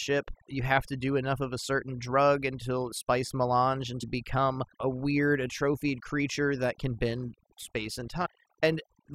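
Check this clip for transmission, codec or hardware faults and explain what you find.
Two problems turn up in this speech clip: heavy-handed processing running the whole way through, and a couple of short glitches from a damaged compressed stream.

The overdone noise removal runs from start to finish. A noise reduction stage was pushed too hard, so any frequency band sitting near its idea of the noise floor gets pulled way down or gated off entirely, and softer parts of the speech get dragged under with it. You hear it as a background that drops away and breaks up into little twinkly specks.

Then there's damaged data in a compressed stream, twice. The first hit is a single blip at about 4.02 s, right after "drug until spice melange" and just before "become a weird atrophied". The second runs from 8.25 to 8.27 s. In both spots some of the encoded data was corrupted, so the decoder couldn't make sense of those frames, lost its place and had to hunt for the next valid frame header. 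That comes out as a brief glitch in the audio.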